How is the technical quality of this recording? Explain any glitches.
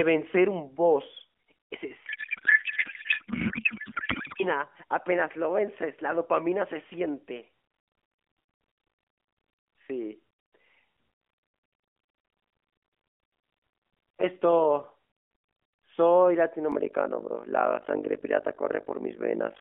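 Two real glitches here, on top of a narrowband phone-style sound, roughly 250 Hz to 3.4 kHz, with the light AMR-NB coloration you'd expect from something like the 12.2 kbps mode.

From 2.06 to 4.44 s there's a codec payload misread. The decoder is unpacking the AMR bits with the wrong layout, which sounds like octet-aligned frames being read as bandwidth-efficient. So the fields land in the wrong places and the speech turns into garbled warble and noise that barely tracks it.

From 16.72 s to the end there's overlap-add ripple. The frames were stitched back together with windows that don't sum to a flat gain, so the level dips by about 60 dB once per frame, around 50 times a second. You hear it as a rough flutter.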